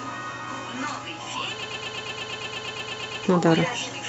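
From 1.63 to 3.24 s the speech gets stuck in a broken-record loop: one 117 ms fragment repeats 14 times back to back, likely a stalled player or stream resending its last buffer.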